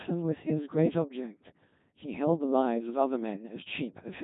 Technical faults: Codec 2 vocoder

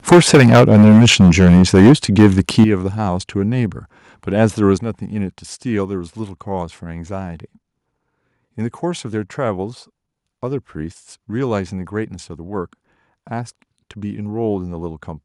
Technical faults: microphone overload; microphone volume stepped down

